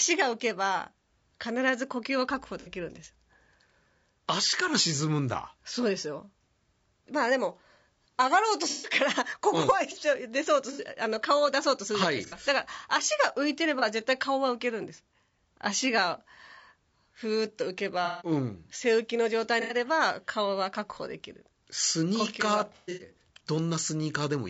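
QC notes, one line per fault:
throughout: low-delay AAC compression. The speech was likely encoded as AAC-ELD, at a rate that sounds like about 32 kbps. Its short frames resolve pitch harmonics poorly, so the voice is plainly rough and grainy, with noise filling the gaps between harmonics.
2.60–2.69, 8.69–8.96, 10.73–10.81, 12.26–12.35, 13.79–13.83, 18.05–18.31, 19.61–19.75, 22.76–23.11 s: AAC frame loss with concealment. Coded frames went missing and the decoder rebuilt them from the last good spectrum. Each gap of 30 to 210 ms becomes a smeared, noisy or phasey patch. The last is scattered over about 240 ms, with its longest unbroken run around a tenth of a second.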